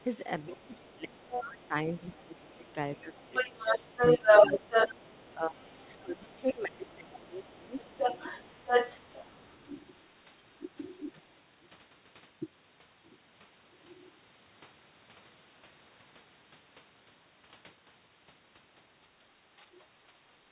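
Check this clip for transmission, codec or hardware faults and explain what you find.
Yes, there's a clear echo-control problem here: a second voice bleeds in over the first ten seconds or so, and the main speech gets pushed down while that's going on. The whole clip is band-limited with nothing above 4 kHz, which fits a narrowband G.711 call path and is normal for it.

Other side's voice leaking through shows up at 0.00–0.63 s, 1.31–2.14 s, 2.96–6.94 s, 7.77–10.03 s and 11.16–11.36 s. The first and last bits are faint, about 25 and 30 dB under the speech. The middle ones are much stronger: about 5 dB under at 1.31 s, roughly level at 7.77 s, and about 5 dB louder than the talker across 2.96–6.94 s. This is likely residual echo: the far end played out of a loudspeaker got back into the mic, and the canceller didn't strip it.

Speech suppressed in double talk runs through 0.49–9.09 s, with about five seconds of that stretch affected in total. 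The talker dips by as much as about 25 dB in places, so words thin out or drop in chunks while the leaked voice is present. There's one more short dip of about 5 dB at 19.60–19.65 s. The likely cause is the echo canceller failing to tell the near talker from the echo and ducking everything together.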